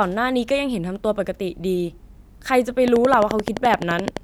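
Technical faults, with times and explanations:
2.88 to 4.18 s, train of clicks: a regular ticking of around fifteen near-identical pulses at 11.6 per second sits over the speech and the pauses, peaking well above it, likely from electrical interference from nearby equipment or a faulty connection or power supply.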